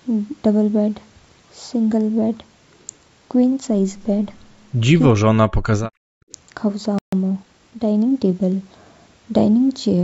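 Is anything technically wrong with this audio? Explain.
Yes, four faults can be heard.

From 5.09 to 5.92 s the speech suppressed in double talk problem appears. The voice sinks sharply, by roughly 40 dB at its deepest, and thins or breaks up for about 0.7 s in total. This is likely an echo canceller facing both sides talking at once. It could not tell the near talker apart from the returning loudspeaker echo, so it attenuated everything it heard.

Between 6.21 and 6.32 s the background is gated by the echo canceller. The room tone drops by about 26 dB for roughly a tenth of a second, then comes back. The canceller clamped the microphone down hard while the far end was playing through the loudspeaker, and released it once that playback eased.

A playback stall cuts the sound off abruptly from 6.99 to 7.13 s, leaving a 140 ms hole in mid-flow before the audio resumes. The likely cause is the player starving for data or having its thread blocked, so nothing reached the output until it recovered.

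From 7.13 to 8.53 s, time-compressed catch-up follows. The audio runs about 1.1 times fast at unchanged pitch. The player is clearing the backlog built up during the stall by trimming short slices and cross-fading across the joins.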